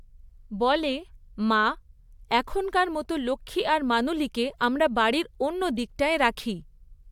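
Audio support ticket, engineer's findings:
No faults found in clip.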